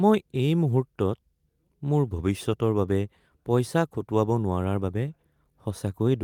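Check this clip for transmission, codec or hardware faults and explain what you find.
No transmission, codec or hardware faults turn up in this clip.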